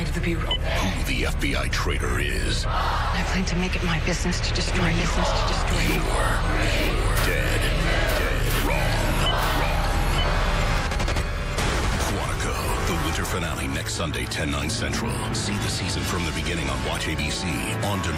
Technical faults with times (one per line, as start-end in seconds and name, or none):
4.67-12.15 doubled audio track